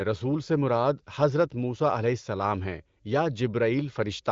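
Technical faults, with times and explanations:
No technical faults can be heard anywhere in this speech.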